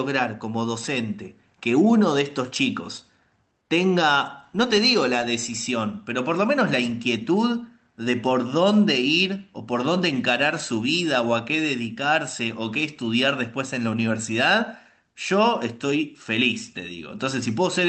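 Nothing stood out on listening to this speech, which carries the ordinary coding character of a WebRTC call path using Opus at 32 kbps.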